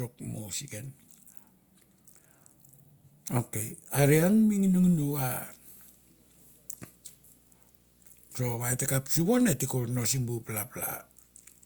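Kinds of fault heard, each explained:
Video or display buzz: video-cable or screen interference, a 59.94 Hz field-rate buzz with hash and a 15.7 kHz line tone, faint under the speech from 5.19 s.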